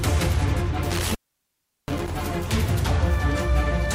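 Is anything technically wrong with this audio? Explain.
Yes. From 0.90 to 2.11 s there is an intermittent contact fault: a loose connection opens for about 0.73 s in total, cutting the sound with crackle at each break and faint hiss while open. The waveform shows sharp spikes around near-flat gaps; the spectrogram shows broadband vertical clicks.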